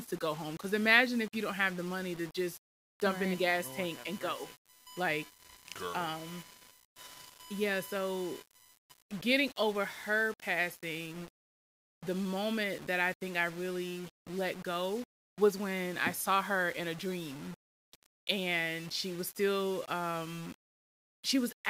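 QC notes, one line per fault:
Throughout: low bit depth without dither. The speech is grainy and gritty, with distortion that follows the signal, and quiet tails sputter or drop to silence. This is likely from rounding to about 7 bits with no dither. The waveform shows visible stair-steps, and the spectrogram shows a noise floor about 20 dB down that rises and falls with the voice.
3.05–9.03 s: USB whine, starting after "the money to just" and ending before "getting over her passing". A steady fixed-pitch whine sits on a 1 kHz fundamental, with the 3 kHz harmonic strongest, at about 20 dB below the speech. This is USB frame current leaking into power or ground. The spectrogram shows flat horizontal lines at 1 kHz multiples.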